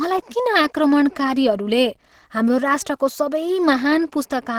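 Across the whole speech clip the voice sounds hoarse and grainy, with rough, noise-filled upper frequencies, though the top end still reaches about 20.3 kHz. This is likely Opus compression at a low bitrate, near 16 kbps, in its hybrid speech mode.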